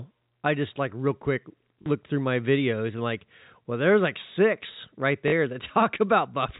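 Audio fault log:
1.82–1.86 s and 5.28–5.32 s, packet loss with last packet repeated: after "just like real quick" and after "there's like six right", 40 ms of sound was lost, which fits two 20 ms packets. The final packet replays, buzzing briefly near 50 Hz, a robotic stutter rather than a silent gap, over the narrow G.711 telephone band.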